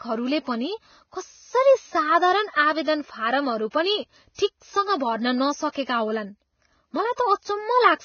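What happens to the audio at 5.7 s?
At 5.72 to 5.75 s a pre-echo appears: a short hiss of about 35 ms runs ahead of a sharp onset in the speech, which then sounds softened and smeared. The transform codec spreads quantisation noise across its whole block, so noise meant for the loud attack leaks into the quiet moment before it.

Around that moment the speech also carries heavy, grainy, hissy coding damage, with nothing above 6.6 kHz. This points to heavy Vorbis compression, likely at a very low bitrate near 17 kbps, where coarse quantisation turns treble detail into noise.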